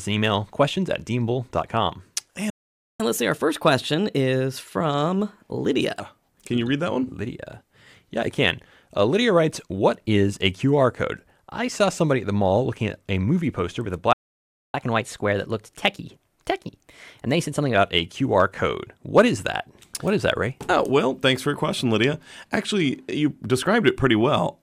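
At 2.50 s the sound halts for about 0.5 s, and again at 14.13 s for about 0.61 s. These are playback stalls, most likely the player running short of buffered data or its thread being held up. Unlike a dropout, nothing is skipped: the audio resumes exactly where it stopped. Each stall is followed by catch-up at higher speed. From 3.00 to 6.00 s the backlog plays at 1.15 times normal speed, raising pitch by about two semitones. From 14.74 to 17.74 s it runs at 1.1 times, about one and a half semitones up. Unlike a steady pitch or speed error, each episode lasts three seconds and then settles back to normal.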